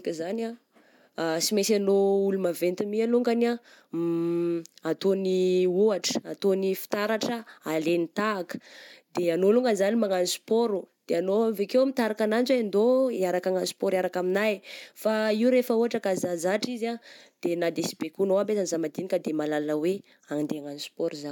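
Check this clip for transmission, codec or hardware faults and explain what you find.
Nothing in the speech points to a fault anywhere along the signal chain.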